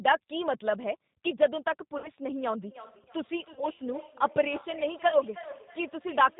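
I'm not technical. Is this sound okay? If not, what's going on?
No. Three separate problems can be heard.

The whole clip passes through the G.729 codec, a compact phone-call compressor that rebuilds speech from a simple model of the voice. It cuts everything above 4 kHz, so speech sounds muffled, slightly rough and a little artificial.

There is VoIP packet loss concealed by the speech codec at 1.98–2.12 s, 3.53–3.67 s and 5.09–5.20 s. Pieces of the call went missing, and the decoder filled each gap by stretching the last sound into a fading buzzy tone or coloured noise. The first gap is about 60 ms and the other two about 30 ms, and the voice stays weak briefly after each one.

From 2.63 s to the end there is feedback echo between two devices. Two phones or computers in the same room are on the call, and each picks up the other's speaker. The speech comes back roughly every third of a second as a quieter, thinner repeat.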